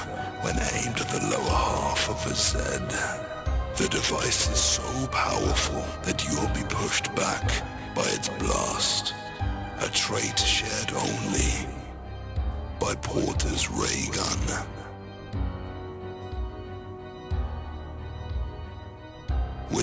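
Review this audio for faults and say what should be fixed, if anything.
Aliasing runs throughout the clip. The audio was downsampled without an anti-aliasing filter, and the sound points to a drop to about 16 kHz, which places the fold at 8 kHz. Content above that line has reflected back down as false, unrelated tones, sitting roughly 10 dB below the real signal. The result is a gritty, metallic edge on bright, high-frequency sounds, with energy pressed hard against 8 kHz instead of rolling off smoothly. To prevent it, low-pass filter below the new Nyquist frequency, or use a proper resampler, before reducing the sample rate.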